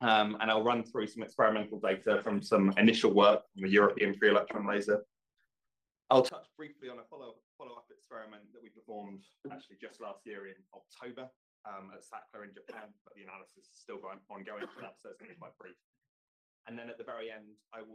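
From 6.29 s to the end, one channel was likely inverted, cancelling everything the two channels share in mono; the sound drops about 21 dB, leaving only a faint residue.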